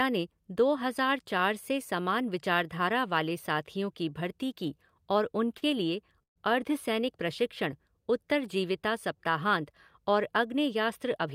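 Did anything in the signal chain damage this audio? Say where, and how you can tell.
Yes. At the network stage there is a short stall from a late packet between 5.58 and 5.64 s. The last sound is held about 40 ms too long with a faint buzz or dip, then carries on with nothing lost. A spectrogram shows the harmonics frozen into flat, smeared bands for that instant.

From 6.23 to 6.38 s there is a call audio freeze. The sound turns briefly to a fading buzz or hiss, drops to silence for about 120 ms, then resumes exactly where it stopped. About 128 ms is inserted in all. The waveform shows a decaying tail into a flat line. The likely cause is packets delayed on the network, emptying the jitter buffer.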